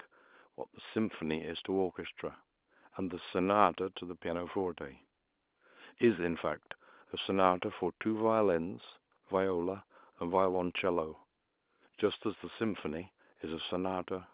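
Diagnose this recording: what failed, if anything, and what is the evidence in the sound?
Nothing has failed: the speech carries the band limit below 4 kHz and the faint level-tracking quantisation hiss expected of G.711 A-law telephone coding at 8 kHz, and no stage from capture to playback leaves any further mark in the sound.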